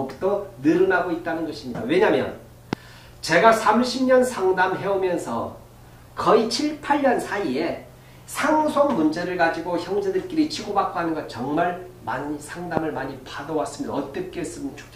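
At 2.73 to 2.75 s a single loud pop lands on top of the audio, peaking roughly 20 dB above it, while the sound carries on underneath. It is likely a voltage pulse from a switch, static or a driver glitch. Unlike a dropout, nothing goes missing. A second, slightly weaker pop, about 15 dB above the signal, hits at 12.77 to 12.79 s.

From 6.25 to 8.52 s there is a drift correction step: the audio runs 5.68% fast, about 96 cents sharp, then snaps back. This is likely clock-matching software changing the playback rate in one jump to balance its buffer. At 13.16 to 14.72 s the opposite step plays 5.68% slow, about 101 cents flat. Each rate is held steady, which sets them apart from the continuous wobble of wow or flutter.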